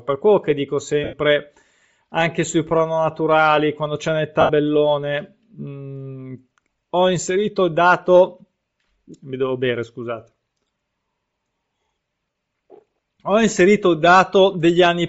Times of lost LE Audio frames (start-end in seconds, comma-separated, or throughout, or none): 1.04-1.13, 4.41-4.49, 12.30-12.35